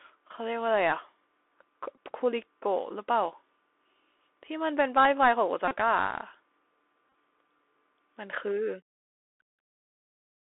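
Speech heard through the Bluetooth CVSD headset codec throughout, band-limited to roughly 300 Hz to 3.6 kHz, which fits a 64 kbps one-bit delta stream whose adaptive step lags fast, loud high content. The result is scratchy sibilants, slope-overload distortion and a constant granular hiss under the speech. Bluetooth headset packets are repeated when voice packets drop and the previous packet's bits are decoded again, and in a run the repeat recurs every 3.75 ms, giving a buzz near 267 Hz. This happens in a brief 15 ms burst at 1.96 s, a 30 ms burst from 5.68 to 5.76 s, and scattered losses totalling 34 ms across 7.10 to 7.14 s, whose longest run is about 20 ms.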